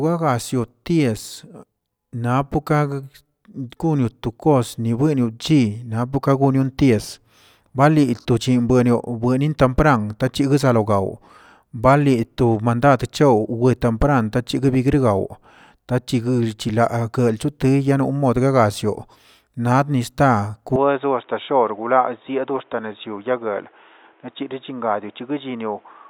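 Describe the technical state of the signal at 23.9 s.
Dull and band-limited, with nothing above 3.8 kHz, slightly quieter and carrying a new noise floor: from 20.76 s, right after "nab nista", the input likely switched to a poorer device.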